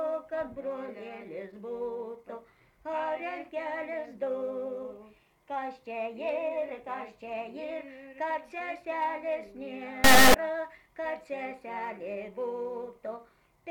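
At 10.04 s the audio turns into a harsh, extremely loud buzzing square wave that lasts until 10.34 s. This is integer read as float: samples stored as 32-bit integers are being interpreted as 32-bit floats, so most values come out either tiny or wildly beyond full scale, and the output slams between silence and the clipping ceiling. Unlike ordinary clipping, which flattens peaks of recognisable sound, nothing of the original waveform survives here.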